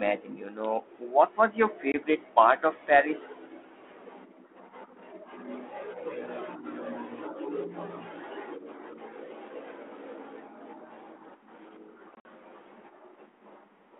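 Packet loss on an ADPCM call cuts a hard 20 ms hole at 1.92 s, then about seven packets drop between 12.15 and 12.25 s in runs up to 50 ms. Each time the decoder's predictor and step size lose step with the sender's, so speech returns slightly distorted.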